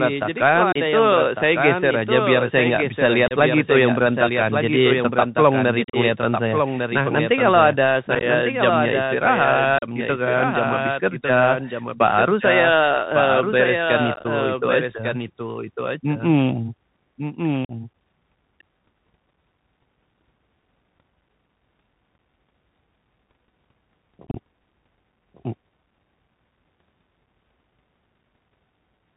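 The speech runs through a Bluetooth CVSD headset codec for its whole length. Its one-bit delta modulation passes nothing above 4 kHz, so the speech is dull and narrowband. Sibilants turn scratchy, loud bright sounds distort, and a granular hiss sits underneath.

A doubled audio track also runs throughout, likely from a second capture path or an out-of-step edit. A full-band copy trails about one second behind at roughly 5 dB down, with no decay or room colour, so every phrase is repeated.

Unconcealed Bluetooth headset packet loss drops short stretches of the link, filled with silence or an idle pattern. Abrupt holes appear at 0.72, 3.28, 5.84, 8.15, 9.78, 14.14, 17.65 and 24.27 s, each losing 30 to 75 ms. Those at 5.84, 8.15, 14.14 and 24.27 s are scattered, sounding chopped and crackly.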